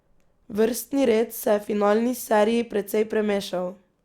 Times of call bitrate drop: none

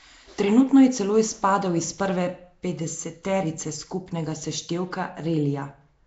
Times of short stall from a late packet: none

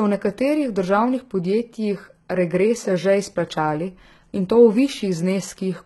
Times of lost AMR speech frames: none

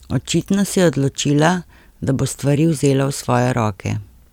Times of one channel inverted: none

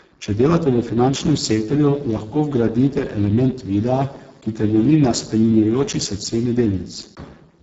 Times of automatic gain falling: none

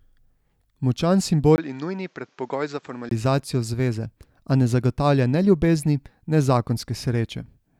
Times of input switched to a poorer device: 1.56-3.11

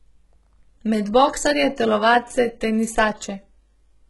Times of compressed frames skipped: none

